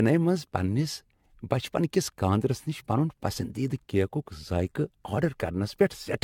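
Generation loss runs through the whole speech clip. The sound is swirly, smeared and hollow, with softened consonant attacks and nothing above 17 kHz. The likely cause is repeated lossy re-encoding, about seven passes, in a chain whose character points to AAC-LC at around 96 kbit/s. Each decode-and-encode cycle quantised the signal again on a shifted frame grid, so noise and spectral gaps piled up beyond what that bitrate alone would leave.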